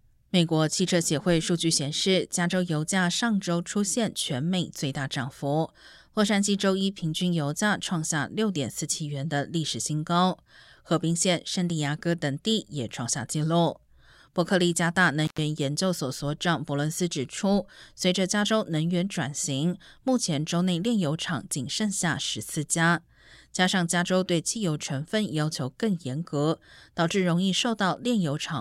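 At 15.25 s the speech breaks off for about 110 ms and returns at 15.39 s. This is an intermittent contact: a loose cable or plug briefly loses its connection, so the signal path opens and then closes again. The gap is framed by crackle where the contact scrapes apart and back together, and faint hiss remains underneath. That ragged, noisy edging separates it from a digital dropout, which leaves clean silence or a smoothed-over gap.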